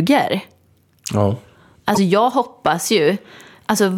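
At 1.92 to 1.98 s there's damaged data in the compressed stream: the decoder misreads corrupted frames and loses sync, leaving a brief chirp, click or dropout in the speech.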